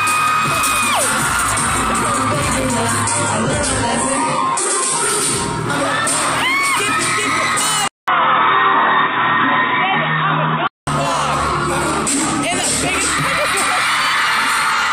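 From 3.02 to 5.02 s the audio abruptly loses everything above 11.1 kHz with no gap, a sudden lower-bitrate stretch that fits an adaptive stream dropping to a low-rate HE-AAC version. At 7.88 s a 200 ms silence is followed by dull, boxy sound cut off above 3.8 kHz, with a faint new noise floor and unchanged level, until full bandwidth returns at 10.87 s. The likely cause is the input switching to a poorer device.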